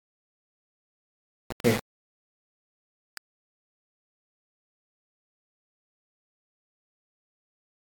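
A speech recording with grainy, rasping distortion over its whole length. The grit follows the voice, roughening quiet syllables, while pauses drop to dead silence or sputter between two levels. The error sits only about 10 dB below the signal, which fits a 4-bit quantiser. The likely cause is low bit depth without dither, with values rounded to a few steps. A waveform would show coarse staircase levels, and a spectrogram would show broadband hash tracking the speech energy and vanishing in gaps.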